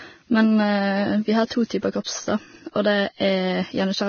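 Throughout the speech, the treble stops abruptly at 6.6 kHz and what remains below it sounds hissy and grainy, with roughened tones and softened consonant onsets. This is likely Vorbis compression at a heavy setting, consistent with a bitrate near 18 kbps, where the cut-off is lowered and the upper residue is quantised so coarsely that fine detail turns into noise. On a spectrogram the energy ends at a flat horizontal edge near 6.6 kHz, and the band beneath shows speckled, smeared texture.

From 2.04 to 2.07 s, a short hiss lasting 28 ms arrives just ahead of a sharp onset. This is pre-echo. The codec spreads its quantisation noise across the whole transform block, so noise scaled for the loud attack also fills the quiet stretch before it. The attack sounds blurred rather than crisp. In the waveform, a low fuzzy wash rises before the transient, and on a spectrogram a broadband smear precedes the attack's vertical stripe.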